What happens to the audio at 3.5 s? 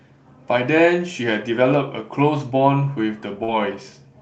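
Short concealed packet loss occurs from 3.43 to 3.51 s. About 40 ms of the speech never reached the decoder in time. The receiver covered the gap with roughly 44 ms of invented sound, extending the preceding pitch where the speech was voiced, or shaped noise where it was not, and then crossfaded back into the real signal. It is heard as a brief smear or wobble, and any short consonant in that instant can disappear.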